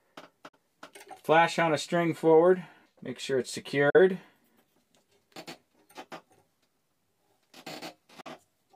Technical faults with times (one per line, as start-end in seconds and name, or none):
0.48-0.57 digital broadcast dropout
3.90-3.99 digital broadcast dropout
8.21-8.31 digital broadcast dropout